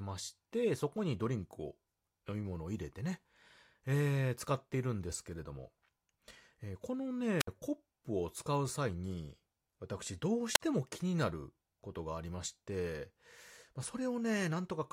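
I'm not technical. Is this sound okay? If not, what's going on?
No. There are two wireless microphone squelch dropouts, at 7.39–7.48 s and 10.53–10.60 s. The radio link weakens, hiss briefly swells, then the receiver mutes the sound for about 60 ms and 40 ms. That hiss before the silence distinguishes it from a clean digital gap.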